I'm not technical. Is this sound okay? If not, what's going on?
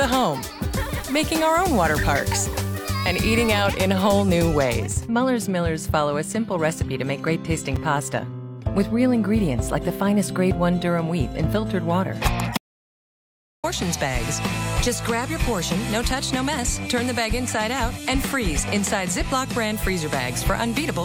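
No. At 7.76 s a block of digital silence, a tiny 5 ms gap where the sound drops out, gives a brief click rather than a hole you'd notice. From 12.57 to 13.64 s an audio dropout to silence cuts everything out for about a second, most likely from the input being lost, so that stretch of sound is simply missing.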